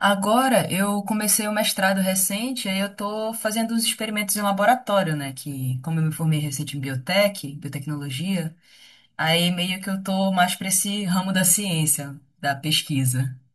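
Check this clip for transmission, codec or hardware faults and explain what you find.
The speech has one fault running through the whole clip: channel delay, causing comb filtering. One channel arrives about a millisecond and a half behind the other. When the two are summed to mono, the shared sound cancels at evenly spaced frequencies, with the first notch around 400 Hz. The result is a hollow, phasey tone. Unlike a flanger or phaser, these notches never sweep. They stay fixed for the full length.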